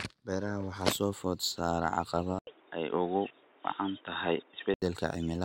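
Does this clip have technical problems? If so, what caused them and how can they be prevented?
Yes. At 2.39 s there's an 80 ms gap, then the speech turns boxy, cut off above 3.8 kHz, with a modest level shift and a faint new noise floor until 4.82 s: likely an input switched to a poorer device. Lock the input device so it can't auto-switch.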